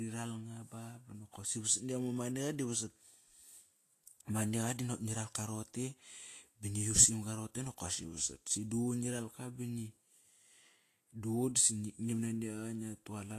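Speech, carrying plainly audible Vorbis compression damage throughout, likely from low-bitrate encoding in the region of 34 kbps. Treble is quantised so coarsely that fine detail turns to grainy hiss, consonant attacks blur, and nothing remains above 14.2 kHz.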